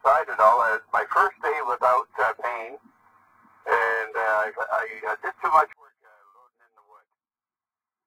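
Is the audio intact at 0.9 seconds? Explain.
Yes, the audio is intact at 0.9 s, with no dropout, click, distortion or other fault at that point.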